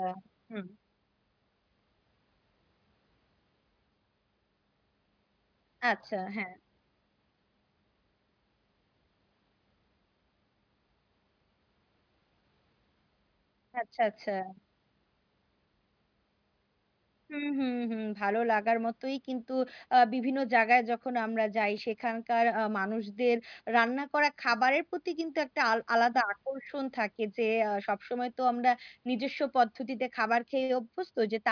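No technical faults can be heard in this recording.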